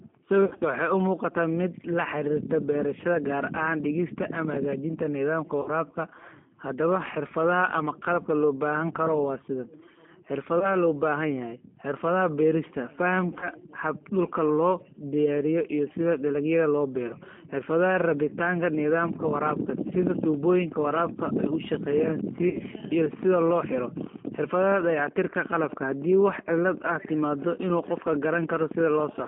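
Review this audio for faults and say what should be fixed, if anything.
The whole recording has been through the G.729 codec, the 8 kbit/s VoIP coder, and the damage is plainly audible. It rebuilds speech from a vocal tract filter, a pitch predictor and a few pulses per frame rather than from the waveform, so the speech comes out rough and slightly synthetic. The line band of roughly 200 Hz to 3.4 kHz removes the low body and all the air. To prevent it, capture the source before the phone path or use a wideband codec.

There are five dropouts from VoIP packet loss concealed by the speech codec. The first, from 0.45 to 0.63 s, is the worst, with about 120 ms missing in bursts across 160 ms and the longest run 60 ms. Shorter ones follow at 5.62 to 5.69 s (40 ms), 10.59 to 10.70 s (20 ms), 13.40 to 13.49 s (20 ms) and 22.49 to 22.59 s (60 ms). In each one the decoder extrapolates from its last pitch and filter into a fading buzz or coloured noise and then needs a moment to recover. 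To prevent it, fix the network or add redundancy or FEC to the stream.

From 19.04 s to 29.19 s there's a train of clicks, around a hundred regular ticks at about 10.7 per second. They peak roughly 5 dB above the speech and are audible through the pauses. The likely cause is interference from nearby equipment or a faulty connection or power supply feeding pulses into the chain. To prevent it, track down that source and isolate it, checking grounding and cabling and moving gear apart.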